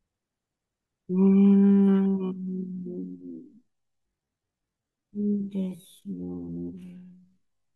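Speech, and from about 1.55 s right through to the end there's a time-stretched section: the pace suddenly drops to roughly half speed (0.53x) while the pitch holds steady, so it drags. Likely someone stretched it to fill a length, repeating little slices to keep the pitch.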